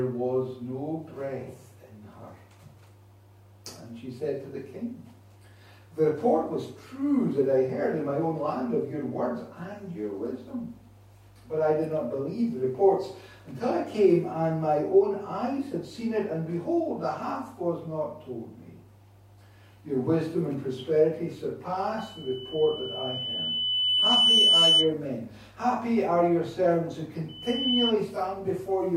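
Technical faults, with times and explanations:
21.98–24.93 s and 27.28–27.93 s, loudspeaker feedback squeal: a 3 kHz tone swells as the microphone re-captures its own loudspeaker and loop gain exceeds one there, growing over roughly two seconds to about 10 dB above the audio, then returning briefly, quicker and about 5 dB above.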